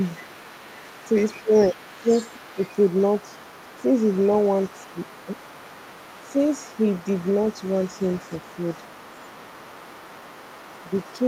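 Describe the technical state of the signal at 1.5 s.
At 1.5 s the speech falls inside a brief dip from 1.42 to 1.52 s, a case of speech suppressed in double talk. The level drops by around 20 dB for about a tenth of a second, so the voice momentarily sinks. This is likely the echo canceller mistaking simultaneous talk from both ends for loudspeaker echo and attenuating the whole microphone signal, the wanted talker included, while the far side is active.

Underneath, the other side's voice is leaking through for the full clip, sitting roughly 25 dB below the main speech. It is a faint second voice behind the talker. The likely cause is residual acoustic echo: the far end is played over a loudspeaker and picked up by the microphone, and the canceller has not removed it completely, so it passes through at reduced level across the 1.5 s mark and beyond.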